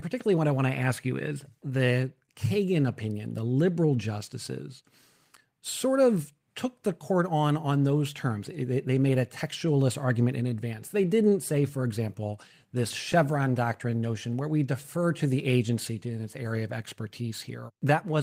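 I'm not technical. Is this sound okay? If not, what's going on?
No. There is clock drift between sender and receiver. The machine that recorded and sent this speech kept time about one percent slower than the machine playing it back, so the receiving end kept running slightly short of sound. That is different from a network dropout, which leaves an obvious gap or burst of noise. Here nothing goes missing. The sound just feels faintly unsteady, with small hiccups at uneven spacing rather than one clear break.

You can hear this as repeated timing corrections. To stay in step, the receiver kept repeating tiny slivers of audio, always stretching and never trimming. From 3.86 to 11.31 s, between "opinion the" and "say for example this", the speech runs at about 99% speed and gains roughly a tenth of a second overall. From 13.90 to 17.78 s it happens again and adds roughly 40 ms. Because every correction goes the same way, the delivery drags a little instead of jumping.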